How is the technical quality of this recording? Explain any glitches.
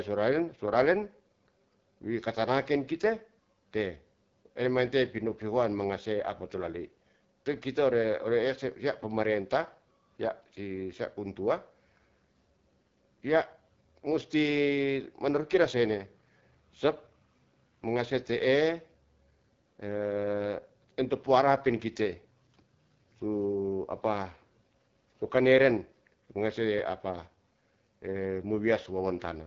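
Technical quality is limited by audible codec damage throughout the speech.

AMR wideband (HD Voice) codec, whole clip: at 8.85 kbit/s the pulse-driven vocal tract model leaves speech rough and raspy; a spectrogram shows smeared harmonics, noise-filled 6.4 to 7 kHz, and nothing above 7.5 kHz.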